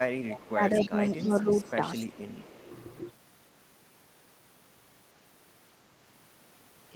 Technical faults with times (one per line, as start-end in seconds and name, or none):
0.31-0.39 echo leak
0.49-1.46 speech suppressed in double talk
0.75-1.30 echo leak
1.65-2.03 echo leak
2.24-2.34 speech suppressed in double talk